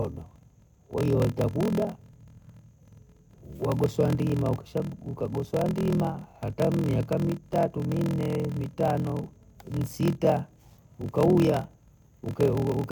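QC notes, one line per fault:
Throughout, block size mismatch (padded). Each block carries less audio than the next stage reads, so a silent gap fills every block. That gives a steady buzz at 41.7 Hz, the block rate. The speech runs at 0.889 times normal speed, at roughly normal pitch, which fits 1024-sample blocks read as longer ones.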